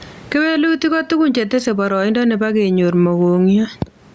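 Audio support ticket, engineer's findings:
Gain pumping, throughout. Loud and soft parts pulled closer in level, sound squashed; swing around 15 dB. Likely cause: input gain far too high, fast limiter/compressor clamping every peak. Waveform: flattened, uniform envelope. Call mic processing caps content near 8 kHz; room noise sits about 40 dB below speech.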